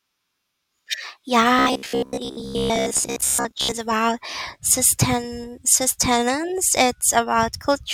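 Robotic sound from repeated short buffers, 1.59 to 3.73 s, before "about sustain sustenance": likely starved input replaying chunks of about 15 ms, imposing a rigid, metallic 66.8 Hz buzz.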